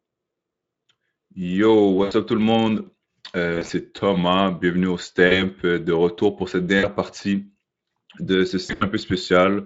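At 2.03 to 2.13 s, just before "up tout le", the speech smears into a short stretched, fading sound: VoIP packet loss concealed by the speech codec, where the decoder stretches its last pitch and filter while turning the gain down, consistent with about 80 ms lost. The same fault recurs at 3.53 to 3.71 s (scattered, about 80 ms), 5.27 to 5.43 s between "bienvenue au" and "euh de retour pour", 6.79 to 6.87 s after "de retour pour cette", and 8.65 to 8.84 s (about 120 ms). Unlike a plain dropout, there's no hard gap of silence, only a stretched, fading sound, and the voice stays weak briefly after each one as the decoder recovers, heard through the light Speex coding.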